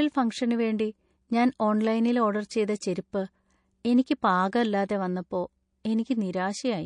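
Speech, likely squeezed through MP3 compression at a bitrate that sounds like roughly 40 kbps, throughout the clip. Starved of bits, the encoder has dropped weak frequency detail frame by frame, so the sound is plainly watery and swirly, with chirpy s sounds.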